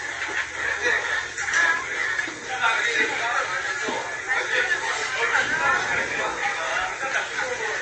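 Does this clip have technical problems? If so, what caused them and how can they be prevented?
Yes. Throughout, the audio has nothing above 8.3 kHz, and its weak detail sounds watery and swirly, with smeared attacks. This is likely MP3 compression, with the encoder trimming treble and switching faint frequency lines on and off between frames, which fits a starved bitrate near 32 kbps. To prevent it, encode at a higher bitrate or keep an uncompressed master.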